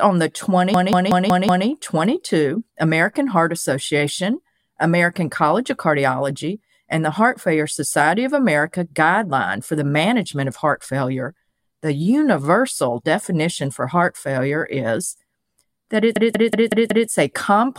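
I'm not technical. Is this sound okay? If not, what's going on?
No. Twice the speech suddenly stutters like a machine gun: from 0.74 to 1.67 s, and again from 16.16 to 17.09 s. Each time, the same fifth of a second of sound repeats five times, about five times a second. This is a system hang loop: the computer briefly froze, and the sound hardware kept replaying the last chunk it held until the computer recovered and normal audio resumed.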